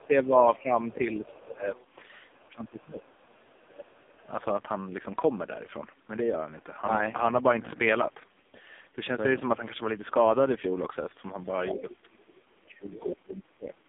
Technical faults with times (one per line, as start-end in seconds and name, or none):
0.00-13.88 AMR narrowband mobile codec